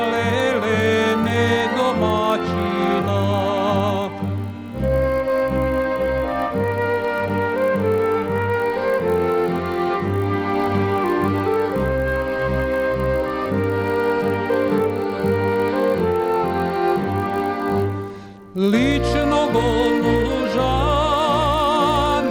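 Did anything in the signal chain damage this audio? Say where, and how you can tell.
Yes. In sample-rate conversion, the resampler restarted on every 20 ms block (24 kHz to 48 kHz). The edge errors make a 50 Hz buzz throughout, only under signal.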